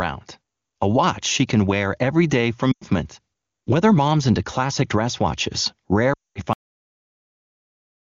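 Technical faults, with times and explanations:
2.72–2.84 s and 6.13–6.42 s, lost AMR speech frames: the wideband decoder held the last pitch and tract settings with falling gain, so the sound drops to near silence within two frames, across about 100 ms and 220 ms of lost speech.
6.53 s to the end, cut-off end: the final buffers never played, so the sound stops mid-sound and drops straight to digital silence with no decay.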